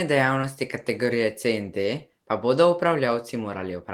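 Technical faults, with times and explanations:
0.41 to 0.45 s, short concealed packet loss: about 20 ms of the speech failed to arrive in time, and the receiver filled the gap by extending the preceding sound before blending back into the real signal, leaving a brief smear or wobble.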